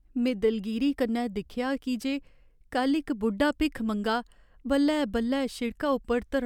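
Nothing stood out as a technical fault anywhere in the recorded speech on careful listening.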